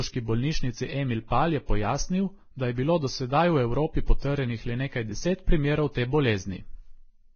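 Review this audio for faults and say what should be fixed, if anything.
Throughout the speech there is heavy Vorbis compression damage, likely from encoding at a very low bitrate, around 17 kbps. Nothing is present above 6.5 kHz, and the remaining treble is so coarsely quantised that fine detail turns into grainy hiss, roughening tones and smearing consonant onsets. A spectrogram shows a hard ceiling at 6.5 kHz with blotchy, noise-like patches below it. To prevent it, encode from the original at a much higher quality setting.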